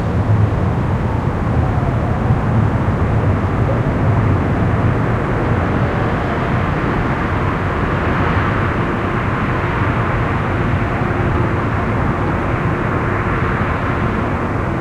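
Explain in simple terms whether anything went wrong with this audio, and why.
A faint gritty fizz follows the louder and brighter sounds throughout. This is crude rate conversion: samples were estimated between points without filtering, which fits a 32 kHz to 44.1 kHz change.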